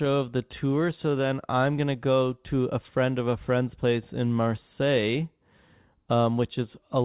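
No technical faults can be heard in this speech recording.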